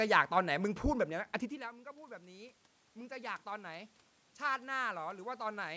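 From 1.09 to 3.98 s, automatic gain rising occurs. The voice drops about 20 dB as the talker moves away around 1.5 s. The gain then climbs about 7 dB, swelling voice and room noise together.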